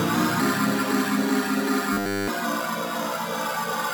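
From 1.93 s to 2.28 s, roughly 0.35 s, the sound collapses into a rigid, metallic buzz pitched at 100 Hz: robotic sound from repeated short buffers. The likely cause is fresh audio arriving too slowly, so playback loops the most recent fragment instead. Across this stretch essentially all of the output is repetition. The 100 Hz buzz implies a repeated segment of about 10 ms.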